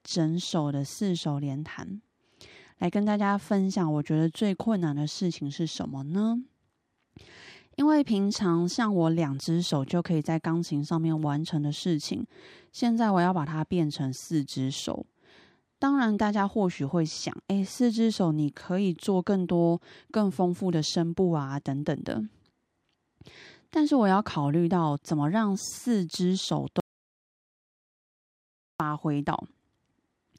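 At 26.8 s the speech breaks off into an audio dropout to silence lasting about 2 s, until 28.8 s, when the sound resumes mid-flow. The gap is dead digital silence with no room tone at all, so whatever was spoken there is lost. The likely cause is the input signal vanishing while recording continued and wrote silence. On a waveform this shows as a flat line; a spectrogram shows a fully blank vertical band.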